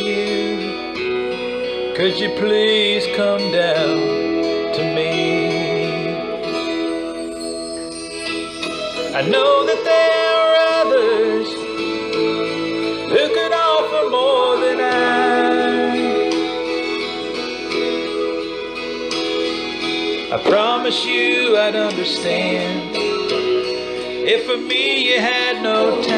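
No audible technical faults.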